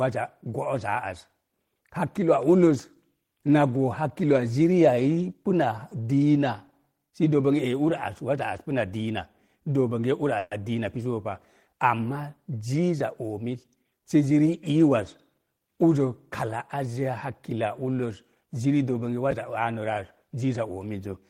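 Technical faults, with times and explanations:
10.38 to 10.52 s, call audio freeze: the speech stops and the last sound carries on as a fading buzz or hiss for about 130 ms. Delayed packets likely emptied the jitter buffer. The speech then resumes where it stopped, so a gap was inserted and nothing is missing.
13.43 to 14.58 s, jitter buffer speed-up: the speech runs about 9% fast at an unchanged pitch and sounds hurried. The buffer held more audio than its target. Short pitch-period pieces were cut repeatedly, roughly a tenth of a second in total.
19.31 s, chunks out of order: a 10 ms chunk plays one chunk late, after the audio that should follow it. Nothing is lost, but the wrong order creates three hard joins. The moment sounds briefly jumbled.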